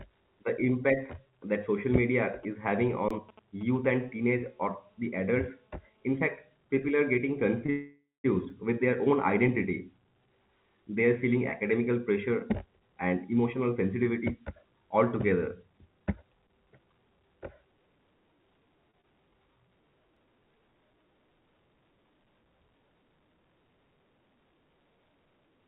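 GSM signalling bursts start at 2.43 s, just after "that social media", and run to 3.86 s. A nearby 2G phone, not yet in a call, sends short groups of radio bursts that the audio circuitry rectifies. The result is a galloping dit-dit-dit of brief 216.7 Hz buzzes, roughly 20 dB below the speech.

An underrun with held sample falls inside that stretch, from 3.09 to 3.11 s. The output buffer emptied for 20 ms and the converter held its last value. The waveform flattens, and about that much live audio is lost.

GSM phone buzz takes over at 3.87 s and lasts until 6.05 s, as the phone moves into a call and transmits in bursts 216.7 times a second. The rectified pulses give a steady, hard, raspy buzz full of harmonics. It sits about 35 dB under the speech and is unrelated to it.

A short stall from a late packet occurs from 7.66 to 7.70 s. One packet missed its slot, and the receiver stretched the last sound for 20 ms until it arrived. 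Nothing is lost, but the sound hangs briefly with a slight buzz or dip.

A call audio freeze follows directly, from 7.70 to 8.26 s. Packets were likely held up in transit, emptying the jitter buffer. The receiver continues the last sound as a fading buzz or hiss, then 210 ms of silence, before resuming where it stopped. The result is a 540 ms gap with nothing missing.

Another underrun with held sample comes at 8.50 s, just before "with their own identity". The output runs dry for 5 ms and holds a flat level, dropping a few milliseconds of audio.

Jitter buffer speed-up begins at 12.66 s, after "are feeling academical pressure", and continues to 16.23 s. With too much audio queued, the receiver trims short pitch-period pieces again and again. About a third of a second is removed, and the speech runs at 109% speed at unchanged pitch, sounding hurried.

Short concealed packet loss occurs at 16.48, 18.91 and 19.01 s. 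Each time, 20 ms of the call never reached the decoder. The gap is bridged by extending the preceding sound and blending back in, which is heard as a brief smear or wobble.

A final underrun with held sample at 20.16 s freezes the output for under 2 ms, a tiny flat spot. Throughout, the call path cuts everything above 4 kHz, which fits G.711 A-law.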